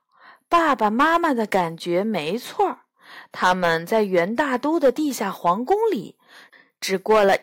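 Nothing technically wrong turns up anywhere in this short stretch of speech; there's simply no fault to point to.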